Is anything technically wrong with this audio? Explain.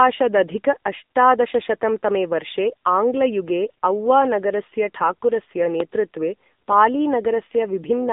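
Yes. Throughout, the speech passes through the AMR narrowband mobile codec: nothing above 3.8 kHz survives, the band sits near 200 Hz to 3.7 kHz, and the buzzy, synthetic quality points to a low-bitrate mode near 8 kbps. Unlike plain band-limiting, the timbre itself sounds rebuilt by a vocal-tract model.

Two loud pops occur, from 5.80 to 5.82 s just after "आङ्ग्लयुगे औवा नगरस्य ठाकुरस्य", peaking about 15 dB above the signal, and from 6.72 to 6.74 s at about 10 dB. Each is a single sharp click with the speech continuing underneath, unlike a dropout. The likely cause is a voltage step from a switch, plug or static.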